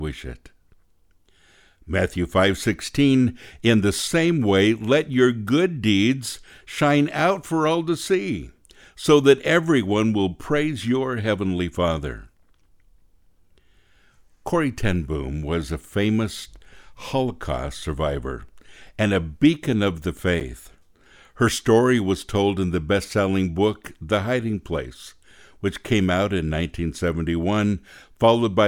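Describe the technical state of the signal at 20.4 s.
A Bluetooth stall, likely delayed packets draining the receiver's buffer, cuts the speech to 9 ms of silence at 20.40 s before it resumes.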